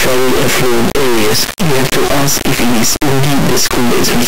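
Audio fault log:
throughout, integer read as float: the speech is replaced by an extremely loud, harsh square-wave buzz that snaps between the clipping limit and dead silence, which fits 32-bit integer samples being decoded as 32-bit floats. Quiet samples become near-zero values, while louder ones turn into huge or invalid numbers that pin at the limits. Unlike ordinary overload clipping, the buzz drops to silence in quiet passages.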